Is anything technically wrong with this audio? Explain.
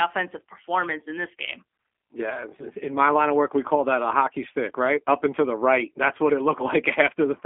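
Yes. Throughout, the speech carries G.729 codec damage: the speech is rebuilt from a filter, pitch predictor and sparse pulses, which sounds rough and synthetic and fits roughly an 8 kbit/s stream. On a spectrogram, the energy stops sharply at 3.4 kHz, with little below 250 Hz.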